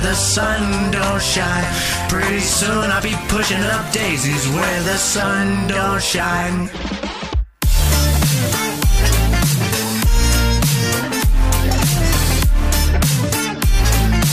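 Nothing in the signal stands out as a technical fault at any point.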